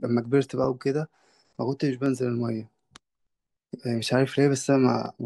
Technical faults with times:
1.07-5.06 clock drift buffer slips

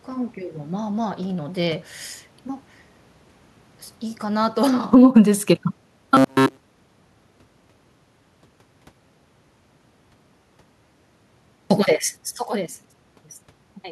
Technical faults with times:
4.23-5.23 automatic gain falling
5.14-5.73 automatic gain rising
6.15-9.18 robotic sound from repeated short buffers

